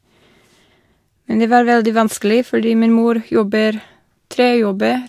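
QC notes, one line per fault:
No faults heard.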